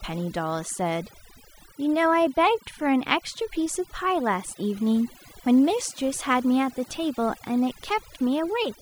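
Overdone noise removal runs throughout the speech clip, from start to finish. A noise reduction stage was set far too aggressively, cutting individual frequency bands down or off whenever their level came close to its estimate of the background noise. Quieter parts of the voice fell below that threshold and were stripped away too, so the gaps between phrases collapse into near silence dotted with twinkling, warbling specks.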